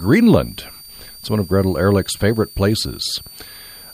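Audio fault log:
Throughout, switching supply whistle: a thin tone wandering between 4.49 and 4.67 kHz, roughly 25 dB under the speech, from a power supply chattering audibly.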